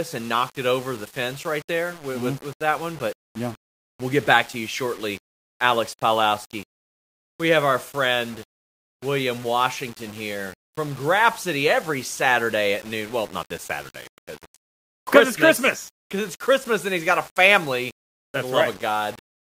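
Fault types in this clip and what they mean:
Low bit depth without dither: speech sounds gritty throughout, with grain about 25 dB below the signal, likely from rounding to roughly 7 bits.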